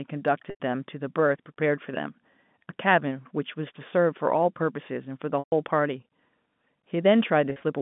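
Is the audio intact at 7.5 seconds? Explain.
No. From 7.5 to 7.62 s the sound briefly catches and holds, with a few slightly buzzy, sustained fragments instead of clean continuation. This is packet loss with pitch repetition. About 80 ms of audio went missing, scattered across those 120 ms, with gaps consistent with roughly 10 ms packets. The longest single gap was 40 ms. At each gap the receiver repeated the last pitch period to fill the hole, which produces that held, buzzy quality.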